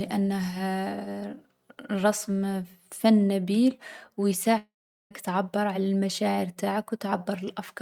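At 4.57 s the speech breaks off and does not resume cleanly until 5.13 s, a gap of about 0.55 s. The last sound is drawn out into a fading buzz, and the final 0.4 s or so of the gap is silence. When audio returns, roughly 0.54 s of speech is simply gone. This is likely a long network dropout: packets stopped arriving, the receiver concealed the loss briefly, and the missing stretch was never recovered.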